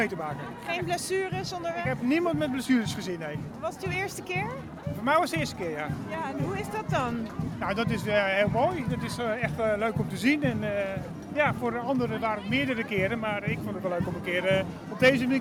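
No technical faults can be heard anywhere in the recording.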